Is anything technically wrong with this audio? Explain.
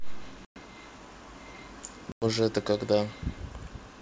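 Yes. The speech has two dropouts from packet loss on an ADPCM call, at 0.45 to 0.58 s (about 110 ms lost) and 2.12 to 2.25 s (100 ms), each roughly ten packets. Silence fills the gaps, and the decoder's predictor and step size drift from the sender's, so audio returns with a hard edge and brief distortion.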